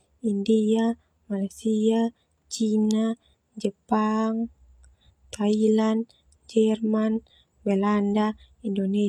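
No technical faults can be heard anywhere in this recording.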